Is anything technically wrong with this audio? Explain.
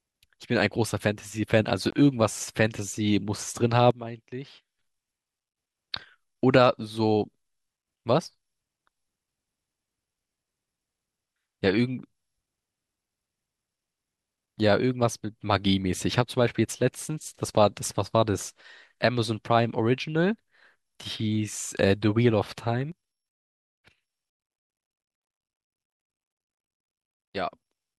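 Yes. At 1.90 to 1.93 s the speech cuts to silence for about 20 ms, then resumes as if it had kept playing underneath. This is likely a Bluetooth dropout: the wireless link delivered audio late, which fits a single lost packet, and the headphones output nothing until the next good one arrived.

At 3.91 s the speech and background noise drop together by about 13 dB, staying low until 4.79 s, and at 22.92 s they fall by about 10 dB through to the end. Both are likely a sudden gain jump, where digital gain changes between samples with no ramp.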